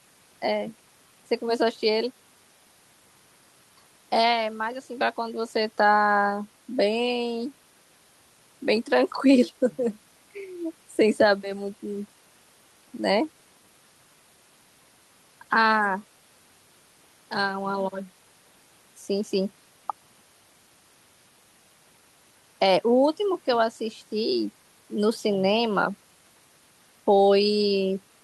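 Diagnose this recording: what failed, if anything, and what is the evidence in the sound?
Nothing failed here: listening across the whole recording, nothing in the sound points to trouble at any stage of the chain.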